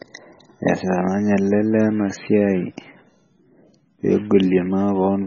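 Throughout the speech the sound is watery and swirly, with chirpy metallic edges on s sounds, smeared consonant attacks, and nothing above about 6.9 kHz. This is likely heavy MP3 compression at a very low rate, consistent with around 16 kbps, where the encoder cuts the treble and lets weak frequency components flicker on and off between frames.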